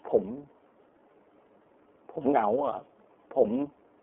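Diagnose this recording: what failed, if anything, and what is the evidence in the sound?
The failure is at the codec stage: the speech went through the iLBC codec, a narrowband VoIP coder that encodes each frame's excitation independently of the previous one. Throughout the clip the band is confined to roughly 250 Hz to 3.4 kHz, so the low body and all the upper sibilance are gone. The codec damage is plainly audible as a rough, slightly synthetic texture, which fits 30 ms frames at the 13.33 kbps mode.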